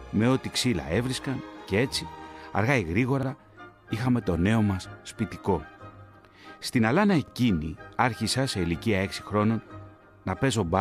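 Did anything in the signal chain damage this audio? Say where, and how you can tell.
Yes. Overlapping chunks at 3.23 and 7.28 s: a 48 ms stretch replays as a stutter, because each 4-second buffer chunk begins before the previous one ends.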